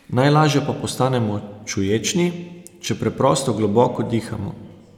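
No faults can be heard anywhere in this speech recording. The audio runs without any dropout, glitch or distortion.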